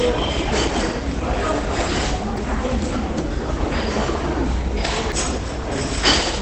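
From the start the audio is muffled and hoarse, with nothing above 8.7 kHz. That points to Opus compression at a low rate, likely around 16 kbps, where the encoder falls back to its SILK speech mode.

At 2.37 s and again at 5.12 s the sound jumps forward with no silence in between, so each is a skip rather than a dropout. Each loses roughly a third of a second. The regular spacing fits audio missing between chunks, likely 3-second chunks, with a piece lost at every changeover.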